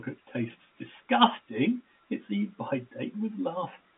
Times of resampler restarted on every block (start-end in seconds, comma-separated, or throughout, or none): none